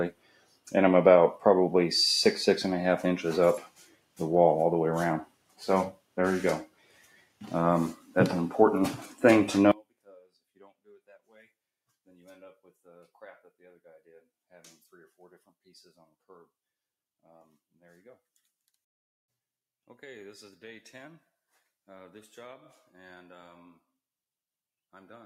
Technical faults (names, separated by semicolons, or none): noise suppressor applied to music or sounds; sound cut by the noise suppressor